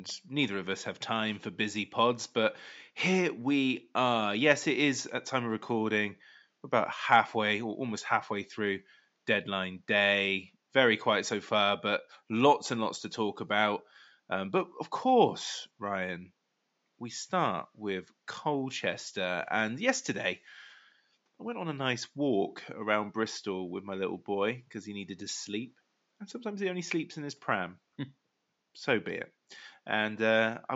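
Nothing in this speech clip points to a technical fault in the recording or playback chain. A faint room noise sits far beneath the speech, about 49 dB lower, and belongs to the space where the microphone was rather than to the system.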